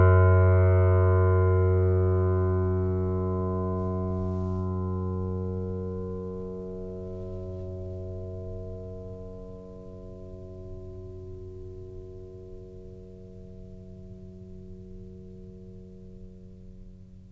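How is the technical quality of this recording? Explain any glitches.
No glitches in this music recording: nothing breaks up, drops out or distorts anywhere in it.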